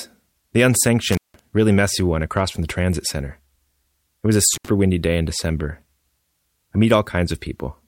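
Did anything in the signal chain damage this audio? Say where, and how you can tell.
Yes. The speech drops out with crackle at 1.12–1.39 s, before "really messy one across", and at 4.54–4.69 s, between "was a" and "windy day in". This intermittent contact in the analogue wiring, a loose cable or plug, broke the line for about 171 ms and 71 ms.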